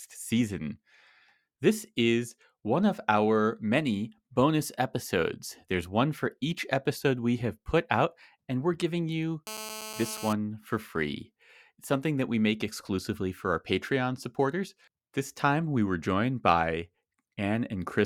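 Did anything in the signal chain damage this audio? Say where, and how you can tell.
Yes. GSM phone buzz entered in the analogue wiring between 9.47 and 10.33 s: a hard, raspy 217 Hz buzz about 12 dB below the speech, steady as during a call, from rectified radio bursts. Mains hum would sit at 50 or 60 Hz and sound smoother.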